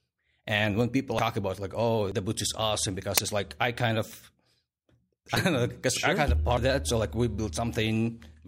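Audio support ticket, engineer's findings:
Compressed frames skipped at 1.09–1.37 s, 2.02–2.12 s and 6.48–6.67 s. Speech jumps ahead by roughly a fifth of a second at the first and about a tenth at the others. Decoder or demux dropping missing or rejected frames.

Corrupt FLAC frame, 3.17–3.26 s: error peaking around -5 dBFS. The span fits a few consecutive frames. Flipped bits send the predictor off on bad values until each damaged frame ends. Clean again at the next good frame, so checksum verification looks skipped.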